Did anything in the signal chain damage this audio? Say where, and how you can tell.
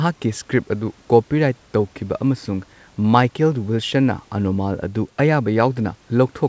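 No, nothing in the signal chain stood out as damaging this speech on listening.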